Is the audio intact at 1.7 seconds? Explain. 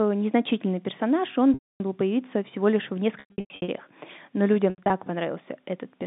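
No, 1.7 s falls inside a packet loss with pitch repetition gap from 1.54 to 1.80 s. About 260 ms of audio is missing. The receiver repeats the last pitch period, which fades out over about 50 ms into silence, and then a short cross-fade brings the speech back.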